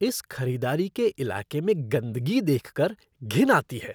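No technical faults are audible.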